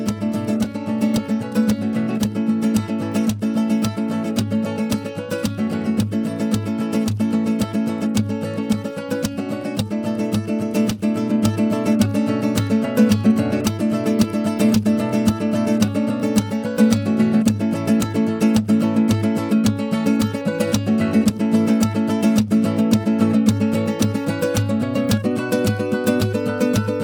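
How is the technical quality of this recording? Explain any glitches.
No glitches or technical faults can be heard anywhere in the recording; the signal stays intact and continuous throughout.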